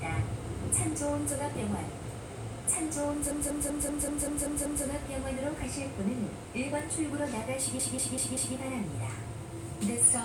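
From 3.31 to 4.85 s and again from 7.79 to 8.56 s, repeated frames make the same 192 ms block replay, adding 1.5 s and 0.77 s. It shows as identical repeating spectrogram stripes. At 6.80 s a bit error spike, a flipped bit in one sample, gives a single sharp tick, a one-sample waveform spike and a thin full-band spectrogram line.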